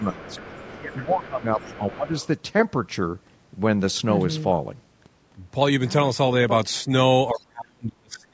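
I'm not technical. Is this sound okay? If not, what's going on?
No. Two related call faults show up, both tied to the two sides of the call talking at once.

Speech suppressed in double talk: the talker's speech dips or partly drops out from 0.0 to 0.29 s, 0.79 to 1.6 s and 1.78 to 2.13 s. From 7.31 s to the end it almost disappears. The likely cause is the call's echo canceller. With both people speaking, it couldn't tell the talker apart from the other side's voice coming out of the loudspeaker, so it turned everything down.

Other side's voice leaking through: a second, quieter voice can be heard underneath from 0.22 to 1.13 s, 1.42 to 1.97 s and briefly at 2.17 to 2.27 s. It sits well below the main talker. This is likely the same echo canceller not fully removing the far end's voice as the microphone picked it up from the loudspeaker.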